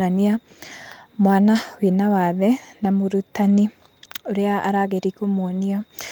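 In this speech clip, from 3.41 to 3.59 s the sound turns briefly rough and noisy without dropping out. This is a lost packet rebuilt from error correction: five separate lost packets were each filled from a low-bitrate copy carried in the following packet, so the gap is replaced by coarser audio.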